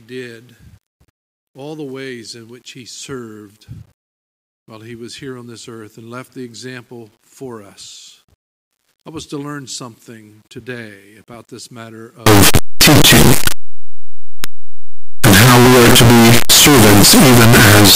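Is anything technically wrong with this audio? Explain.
Yes. From 12.26 s to the end of the clip, the audio turns into very loud, harsh distortion. Quiet moments become as loud as everything else. The likely cause is signed and unsigned samples mixed up, so the top bit of each 8-bit sample is flipped. Each zero crossing then jumps across the full range.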